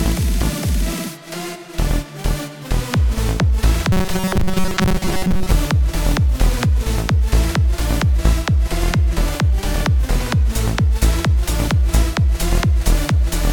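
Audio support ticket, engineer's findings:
Robotic sound from repeated short buffers, 3.92–5.52 s: rigid 188 Hz buzz replaces most audio. Likely underrun looping ~5.3 ms chunks; fixed pitch rules out plain dropouts.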